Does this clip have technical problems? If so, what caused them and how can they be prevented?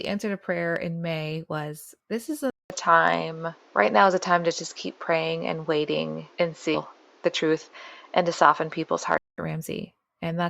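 Yes. Right after "was this", at 2.5 s, the sound goes silent for 200 ms. It returns duller and boxier, with nothing above 7.5 kHz. The level shifts by around 5 dB, and a new background hiss sits roughly 35 dB below the speech. Full clarity comes back at 9.38 s. This is likely an input switched to a poorer device, such as a headset's call profile taking over. Locking the input device in system settings prevents it.

A second fault falls between 6.74 and 6.79 s. The speech jumps forward abruptly, with a small blip at the join. That jump points to a stream segment skipped. One chunk of the segmented stream likely failed to load, and the player went straight on to the next. Part of the programme is simply missing there. A larger playback buffer with segment retries prevents it.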